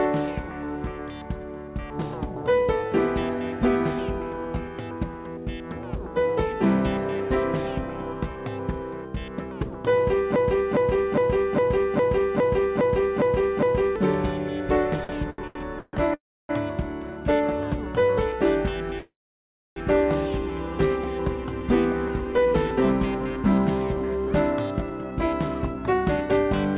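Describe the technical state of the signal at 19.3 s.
At 19.3 s the sound is stalled in a call audio freeze from 18.99 to 19.79 s. The last sound fades out, then about 0.63 s of silence. Packets were likely delayed, so the audio resumes late with nothing lost.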